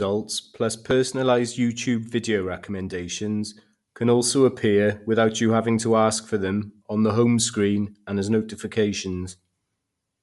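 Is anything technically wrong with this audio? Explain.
Yes, there's a codec problem across the whole speech clip. It sounds like Bluetooth LC3 compression, likely from an LE Audio link. Nothing survives above 11.6 kHz, and the breathy, grainy edge on the speech fits the upper spectrum being noise-filled at around 48 kbps with 10 ms frames.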